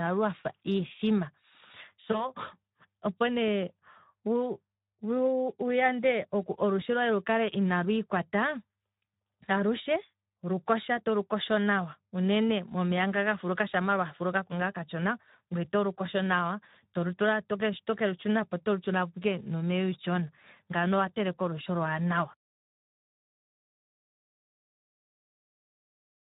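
From the start, the speech carries Speex codec damage. The coder runs near 11 kbps, so the excitation gets few bits. Voices sound noisy and hoarse, plainly so. Any content above 8 kHz is only a shaped noise fill, not real detail.

At 2.11 s comes VoIP packet loss concealed by the speech codec. One 20 ms frame drops. The decoder repeats its last pitch and filter at falling gain. A brief stretched, fading smear results. The voice stays weak and distorted until about 2.30 s.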